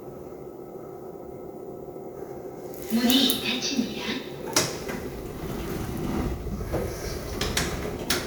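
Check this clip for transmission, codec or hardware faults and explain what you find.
One codec fault is present. At 6.99 s, compressed frames are skipped: the decoder loses or rejects damaged blocks, so the sound jumps ahead about 50 ms, consistent with two frames of roughly 26 ms.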